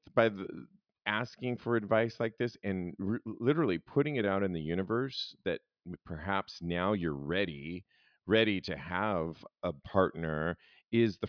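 No technical faults can be heard anywhere in the speech recording. There is nothing to place on the timeline and no failure to explain.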